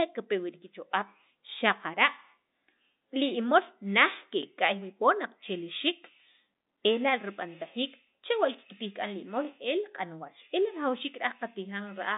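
Speech on a telephone-band line (about 200 Hz to 3.7 kHz, consistent with G.711 coding) has overlapping chunks at 4.43–4.45 s and 9.45–9.47 s: each join replays about 20 ms, giving a brief stutter. Unlike a dropout, nothing goes missing, and the roughly 5 s spacing points to fixed-length processing blocks.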